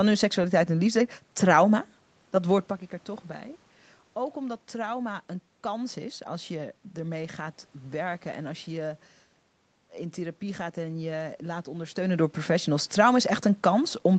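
No technical faults: the top end stopping near 8 kHz comes from the call's Opus coding and microphone processing, the room noise belongs to the recording, and the level shifts around 2.5 s and 12 s are the talker moving relative to the microphone.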